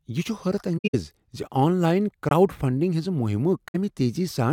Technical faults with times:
0.77-0.95 corrupt frame concealed
2.29 corrupt frame concealed
3.68-3.75 corrupt frame concealed

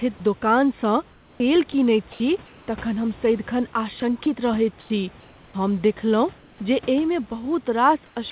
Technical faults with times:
1.10-2.68 sound chopped by the voice detector
4.00-4.26 sound chopped by the voice detector
4.80-4.90 comfort noise in place of the background
6.38-6.60 comfort noise in place of the background
8.06-8.32 comfort noise in place of the background
8.30 sound dropped by the voice detector

